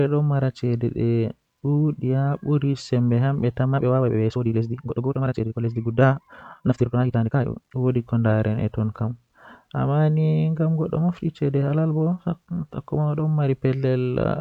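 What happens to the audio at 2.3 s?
Nothing goes wrong at 2.3 s; the speech continues cleanly there with no dropout, click, distortion or other fault.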